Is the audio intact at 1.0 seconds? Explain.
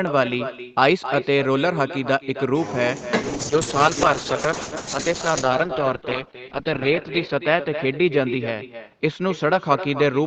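No, echo with no canceller runs throughout: a thinner copy about 11 dB down returns roughly 0.3 s later, a distinct repeat rather than a smooth reverb tail.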